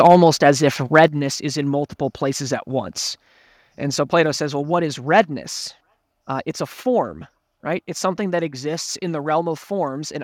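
From 0.00 to 0.68 s the loudest syllables crackle with a harsh, crunchy edge, peaking about 4 dB past the converter's limit. This is likely microphone overload: input gain was set so high that the converter sliced off the tops of the waveform.

At 0.07 s the voice and background drop together, abruptly, by about 3 dB. The call software likely stepped the microphone volume down in one move after detecting the overloaded input.

From 0.95 to 1.04 s the crackle returns, about 2 dB over this time, again likely microphone overload clipping the peaks. At 1.08 s, just before "is in multiple places", the whole level drops suddenly by about 6 dB, likely a second microphone volume step-down following that distorted peak.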